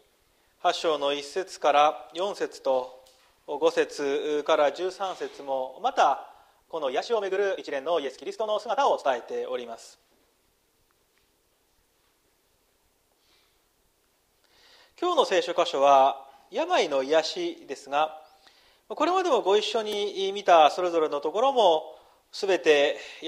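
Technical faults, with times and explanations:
6.79 to 9.07 s, time-stretched section: the pace suddenly jumps to 1.57 times normal while the pitch stays put, so it comes across rushed. That's likely software squeezing the passage to fit a length, dropping short slices to hold the pitch.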